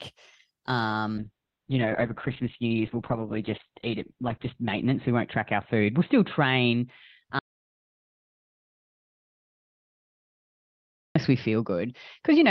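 From 1.19 s the call's bandwidth estimate collapsed, forcing a call bitrate drop from 48 to 6 kbps; the speech turns coarse and watery, muffled above 4 kHz, and never recovers. At 7.39 s the input was likely lost, an audio dropout to silence: the speech cuts to total silence with no room tone until 11.15 s.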